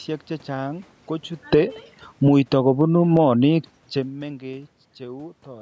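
From 1.39 s to 4.93 s the automatic gain falls, easing the level down by about 9 dB as the control reacts to an input too loud or too noisy for its gain. Unlike the talker moving around 1.5 s and 4.0 s, the room noise sinks along with the speech.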